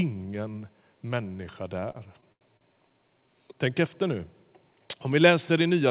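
Between 1.8 and 2.74 s, packets reached the receiver late, so its jitter buffer ran dry five times, producing repeated stalls (stutter). At each stall the receiver stretched the last sound to cover the wait, fading it on the longer holds, the longest about 87 ms. Together these fills add about 208 ms, a quarter of that stretch, while nothing is lost. The speech drags and hiccups there, its narrowband call-path sound cut off above 4 kHz.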